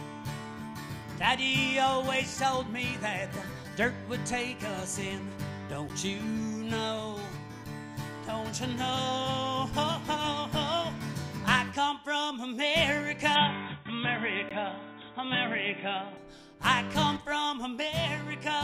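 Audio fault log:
5.89 s and 14.49 s, block of digital silence: the sound drops to silence for about 10.7 ms, which fits a 512-sample buffer that was not filled in time, and then for 16 ms. The hard edges give a tick rather than a fade, unlike a dropout that tails off.
13.35–16.17 s, input switched to a poorer device: with no gap at the change, the sound turns dull and narrow, with nothing above 3.8 kHz, a small level shift and a new, faint noise floor. This is likely a change to a lesser microphone. The whole character changes, not only the treble, which sets it apart from simple low-pass filtering.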